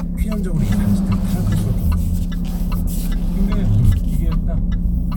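No technical faults can be heard anywhere in this audio.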